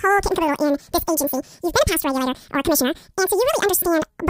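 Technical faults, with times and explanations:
Throughout: audio read two samples at a time (double speed). The speech comes out twice as fast and a full octave up, 12 semitones, because each pair of samples gets treated as one frame, like a stereo or wider-sample mix-up.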